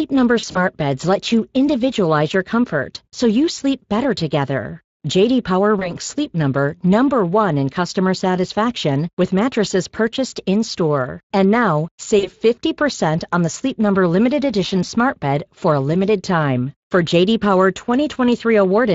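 Across the whole clip the speech has a grainy, hoarse edge, with the upper band sounding like shaped noise rather than real detail. That is Speex codec damage, plainly audible. This CELP speech codec models the voice with a filter and an excitation signal, and at this setting the excitation gets too few bits. The result fits a bitrate of roughly 20 kbps.

From 0.39 to 0.61 s, just before "beds let you individualize", the sound smears into a fading buzzy tone or coloured noise. This is VoIP packet loss concealed by the speech codec. Dropouts of up to 40 ms at a time, about 80 ms in all, are scattered over 160 ms. For each gap the decoder repeats its last pitch and filter at falling gain. Shorter smears of the same kind follow at 5.79 to 5.93 s, where about 20 ms is missing, and at 12.19 to 12.31 s, where about 40 ms is missing. Each leaves the speech weak or distorted for a moment afterwards while the decoder's state recovers.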